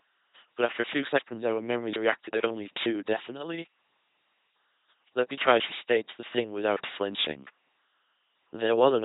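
From start to finish the speech carries the LPC-10 vocoder sound: a buzzing, mechanical robot voice. Each moment is modelled as either voiced or unvoiced, so a single pulse train or noise source drives a small all-pole vocal-tract filter. This leaves hiss or buzz wherever that choice misfires. The heavy damage fits a 2.4 kbit/s stream, and nothing is left above 3.9 kHz. The all-or-nothing voicing separates it from gentler codec blurring.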